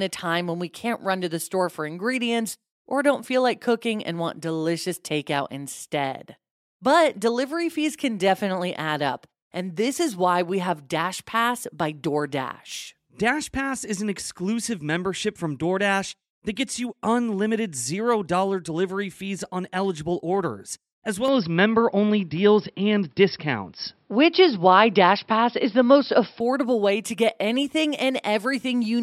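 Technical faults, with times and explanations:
21.28–26.40 s, input switched to a poorer device: after "on eligible orders as" the speech turns dull and boxy, with nothing above 5.4 kHz, a small level jump and a faint new noise floor far below the speech, then clears again before "way to get anything", with no gap at either switch. This likely comes from recording briefly switching to a narrower-band microphone. On a spectrogram the upper band cuts off sharply for that stretch, and the waveform steps in height at both edges.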